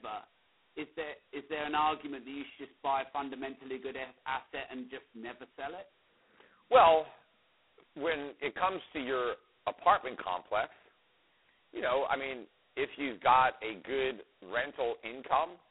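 Throughout, the speech carries heavy G.726 ADPCM damage: a harsh, rasping hiss that tracks its level, consistent with 16 kbit/s coding, band-limited to about 250 Hz–3.4 kHz.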